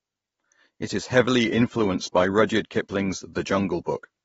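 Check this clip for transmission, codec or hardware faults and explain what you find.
There's one fault, running the whole way through: likely AAC compression at a low bitrate, around 24 kbps, leaving nothing above 7.6 kHz, so the speech sounds dull, smeared and fizzy.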